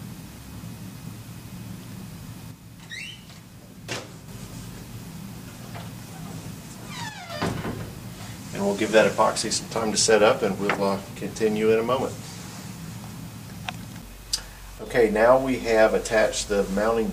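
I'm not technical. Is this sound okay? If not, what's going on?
No. The sound abruptly drops to about half as loud at 2.51 to 4.28 s, 7.09 to 7.30 s and 14.79 to 14.86 s, most likely because one channel drops out.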